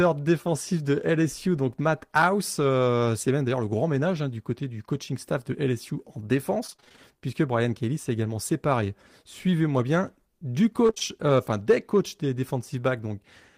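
From 6.67 to 6.99 s the speech breaks up with repeated packet loss (robotic sound): a rapid run of short holes, none longer than about 25 ms, each patched by stretching the preceding sound, so nearly half that span is synthetic fill. The result is choppy, with pieces missing. The same pattern returns briefly from 10.87 to 11.02 s, with holes up to 22 ms and again close to half the stretch concealed.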